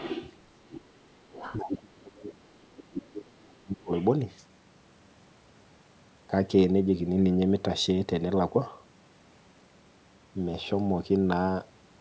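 The echo canceller likely failed to remove the far end's loudspeaker playback from the microphone, so the other side's voice leaks through as scraps from 0.0 to 0.37 s, 0.72 to 1.05 s and 1.31 to 1.57 s. These scraps sit roughly 10 to 20 dB below the main talker.

From 1.57 to 3.92 s, speech is suppressed in double talk. With both sides talking at once, the canceller likely could not separate its own talker from the echo and turned both down. The voice dips by as much as about 30 dB over roughly two seconds.

One last scrap of leakage, around 30 dB down, slips through from 3.96 to 4.05 s.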